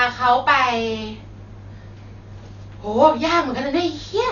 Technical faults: Dolby Digital compression

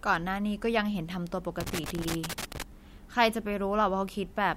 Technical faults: loose connector crackle

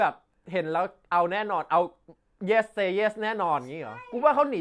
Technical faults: none

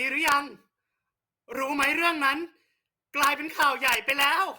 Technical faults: integer overflow

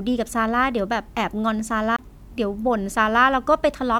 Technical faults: CD skip

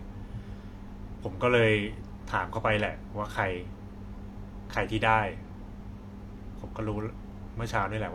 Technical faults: AAC frame loss with concealment

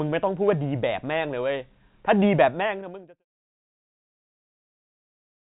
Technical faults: none

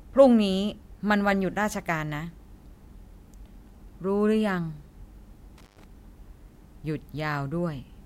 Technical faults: intermittent contact

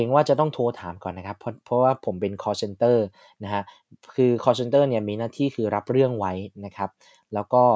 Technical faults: none

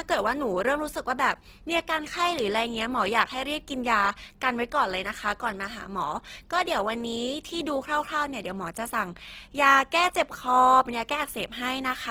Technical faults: Opus compression

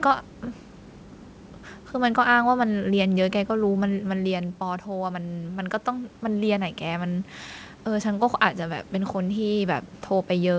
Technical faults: automatic gain rising

